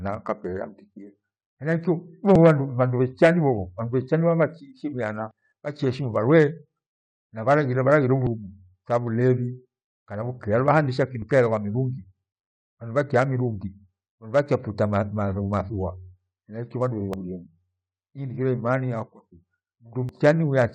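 Short skips of audio missing between chunks occur at 2.35, 5.31, 8.27 (just after "na bharaghire bhalaghire"), 11.22 (after "kana vukaa luvagha hundecha"), 17.13 and 20.09 s. Each snatches away a few tens of milliseconds and splices the edges straight together, with no silent gap as in a dropout. The steady roughly three-second spacing likely comes from the recorder losing audio at each chunk boundary.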